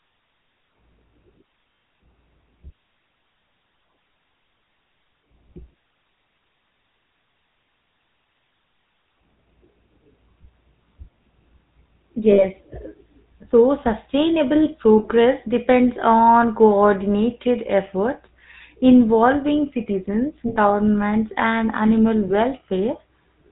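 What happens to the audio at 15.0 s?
Around 14.98 to 15.05 s there's a short burst of lost GSM frames, about 60 ms, which fits three dropped 20 ms frames. The decoder just repeats the last good frame's settings, so the sound hangs as a brief rough, metallic ring before "depends on coordinated efforts" picks up. That all sits on top of the GSM full-rate codec running the whole way through: nothing above 4 kHz, and a plainly audible buzzy, gravelly roughness from the pulse-driven vocal-tract model at 13 kbps.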